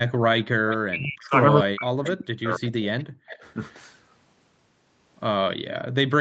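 A speech recording with two faults. From 0.47 to 3.43 s the talker's level repeatedly collapses, at worst by roughly 40 dB, for about two seconds in all. This is speech suppressed in double talk, likely from an echo canceller ducking the talker while the far side spoke. An echo leak is heard three times: 0.69 to 0.77 s, 2.04 to 2.10 s, and 2.99 to 3.36 s. Each is a faint, delayed copy of the voice, about 0.27 s late and well below the direct speech. The likely cause is a loudspeaker echo that the canceller did not fully remove, with the residue sent back down the call.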